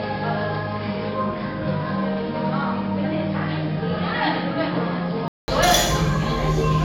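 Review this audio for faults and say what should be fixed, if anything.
From 0.0 s to 5.48 s the input was likely switched to a poorer device, a capture path with a narrower band and its own noise floor. In that stretch nothing reaches above 5.3 kHz, so the sounds come across dull and boxy. They sit about 5 dB lower, over a background noise roughly 35 dB down. At 5.48 s a 200 ms gap marks the change, after which the fuller tone returns. Locking the recording to a single fixed input device, with automatic device switching disabled, would prevent this.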